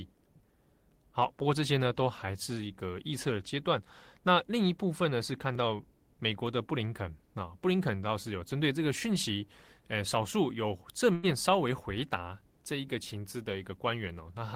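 At 11.15 s a burst of packet loss drops about 80 ms; the receiver stretches and fades the last sound for 77 ms before speech resumes further on.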